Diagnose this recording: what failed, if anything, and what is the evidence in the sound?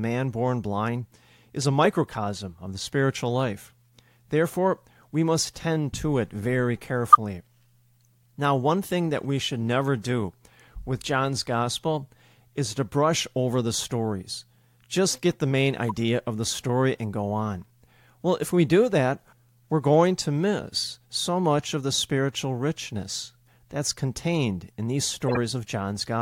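The codec stage failed, with a corrupt frame decoded three times: a near full-scale blip after "tend to it very" at 7.12 s, a quieter one after "get the main" at 15.86 s, and a longer burst after "that's contained in these" at 25.28 s. Flipped bits sent energy to the wrong frequencies for a frame or several.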